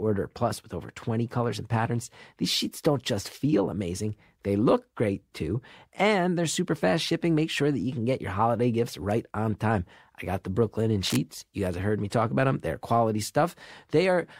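From 11.01 to 11.17 s, scratchy, rustling bursts sit over the speech: cable scratch noise, likely a worn connector shifting and changing contact resistance.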